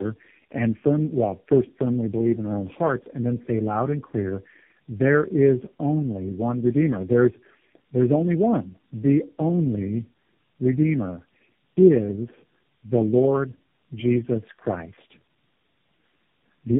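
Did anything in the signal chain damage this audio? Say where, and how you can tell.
Yes, tandem speech coding at the codec stage throughout: the speech is rough and warbly, with nothing above 3.6 kHz. That fits roughly four speech codecs re-encoding each other's output.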